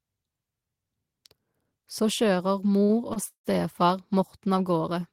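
A speech recording with three timing disruptions clustered in its second half, all caused by packets reaching the receiver late rather than being lost. The first two are short stalls from a late packet, at 2.83 to 2.92 s and 3.13 to 3.19 s. Each time, the jitter buffer ran dry and the receiver held the last sound to bridge the wait, for about 58 ms and then 26 ms. The held segment has a faint buzzy, slightly dipped quality, and the speech then resumes exactly where it paused. Nothing is skipped, but everything after each stall is pushed later by that amount. A call audio freeze follows at 3.28 to 3.47 s and is longer. The receiver extends the last sound as a fading buzz, and about 100 ms of that stretch drops to silence before the speech picks up again. The pattern points to a likely burst of network delay that emptied the buffer for about 165 ms. By the end of this run of stalls, the speech is roughly 250 ms behind its original timing, with no content lost.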